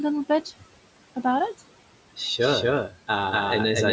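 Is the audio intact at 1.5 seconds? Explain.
No, noise suppressor artifacts run through the whole clip, 1.5 s included: it pulls the steady room noise down by about 18 dB between words, leaving a pumping residue.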